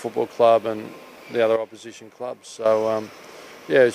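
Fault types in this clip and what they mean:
Sudden gain jump: a digital gain setting was likely switched between one sample and the next with no ramp, so at 1.56 s the sound and its background noise drop together by about 10 dB, then jump back up at 2.66 s.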